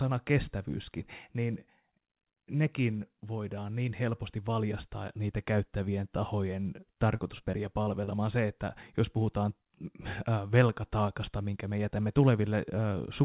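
Repeated packet loss (robotic sound) runs from 7.16 to 8.09 s, just after "valjastaa niitä käyttävien tahojen". Five short holes, totalling 120 ms with the longest 39 ms, are each patched by extending the preceding sound, so the narrowband call audio turns choppy.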